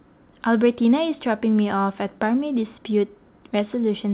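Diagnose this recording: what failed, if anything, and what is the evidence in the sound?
Nothing failed; no faults heard.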